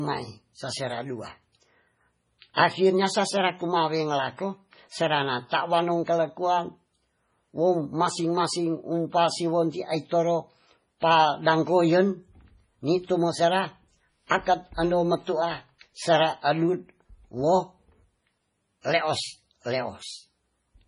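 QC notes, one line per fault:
throughout, MP3 compression: watery, swirly sound with nothing above 10.5 kHz, likely from heavy MP3 encoding at a bitrate near 24 kbps starving the treble.
2.54–2.57 s, 11.00–11.02 s, 14.27–14.31 s, pre-echo: a short hiss of 25 to 35 ms before sharp onsets, with softened attacks, as block-wide quantisation noise leaks ahead.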